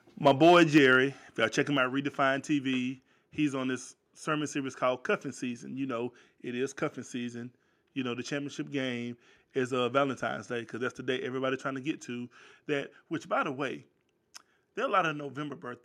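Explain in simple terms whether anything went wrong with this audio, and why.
Microphone overload, likely from the input being set too high, flattened the loudest peaks from 0.26 to 0.96 s, giving speech a harsh, crackly edge. Microphone volume stepped down twice, likely the call software reacting to that overload, so everything suddenly gets quieter at 0.78 s and again at 1.77 s.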